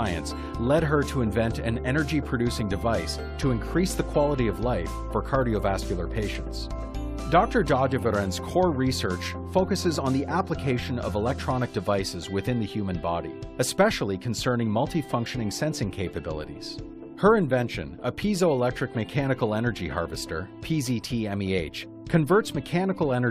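Nothing technically wrong can be heard anywhere in this audio. There is no moment where the sound falters, so there are no times or causes to report.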